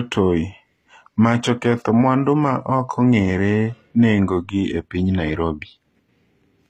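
All the way through, the speech has gritty, lispy s sounds and synthetic-sounding treble topping out near 14.7 kHz, likely HE-AAC compression at a low bitrate around 24 kbps.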